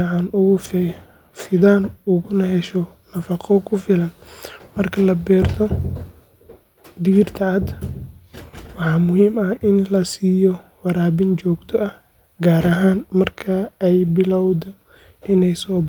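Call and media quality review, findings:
No call or media quality findings to report for this speech clip.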